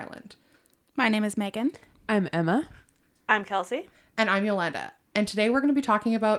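No dropouts, clicks, distortion or level jumps are audible at any point in the speech.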